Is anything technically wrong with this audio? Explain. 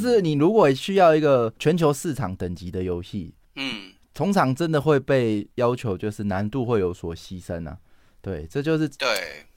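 Yes. Sample clock jitter runs throughout the speech: the converter's clock wanders by roughly a microsecond and a half, so each sample lands slightly early or late. The error tracks the waveform's slope, leaving a hiss-like roughness around 45 dB below the signal that swells on loud, bright syllables and disappears in pauses.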